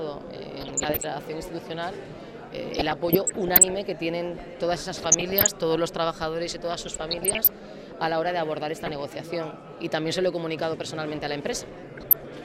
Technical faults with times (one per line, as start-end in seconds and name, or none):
0.53-1.04 DAB burbling
2.74-3.75 DAB burbling
4.97-5.50 DAB burbling
6.71-7.47 DAB burbling
8.79-8.98 DAB burbling
11.97-12.25 DAB burbling